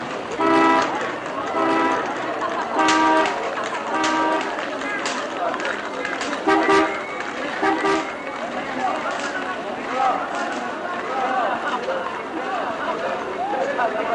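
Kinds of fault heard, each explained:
Doubled audio track: a second full-band copy of the sound runs about a second behind the first, a few decibels quieter, most likely from a duplicate capture path or misaligned edit. Unlike an echo, it is one clean repeat with no decay or room colour.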